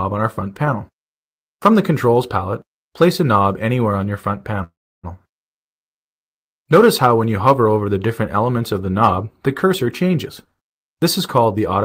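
At 4.63 s the sound stops moving forward and the last moment is carried on as a short fading buzz that drops to silence for most of the gap. This is a call audio freeze, likely caused by packets held up in transit until the jitter buffer ran dry. Unlike a dropout, nothing is cut away. When the audio resumes at 5.05 s it carries on from exactly where it halted, about 0.4 s later than it should.

From 10.27 s to 11.84 s the audio hurries along at roughly 119% speed while its pitch stays where it was. This is a jitter buffer speed-up. The receiver, holding more audio than it wants, trims tiny pitch-period-sized slices again and again, shedding about 0.3 s in total. Resampling would raise the pitch along with the speed. Here only the timing is squeezed.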